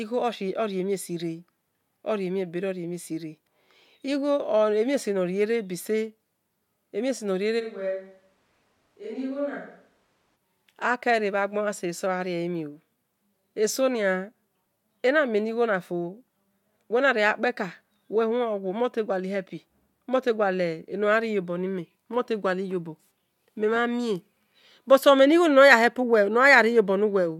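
From 7.61 to 10.35 s the speech turns abruptly roomy, hollow and thinner, a few decibels quieter, with background noise rising to roughly 35 dB below the voice. This is a switch to a distant microphone, likely after the close microphone dropped out. The waveform shows a sudden step down in level, and the spectrogram shows weakened low frequencies and a brighter noise floor between the words.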